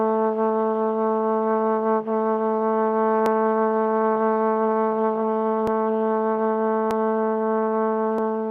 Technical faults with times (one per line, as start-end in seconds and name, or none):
1.71-2.81 scattered short gaps
3.26 dropped samples
5.67 dropped samples
6.91 dropped samples
8.18 dropped samples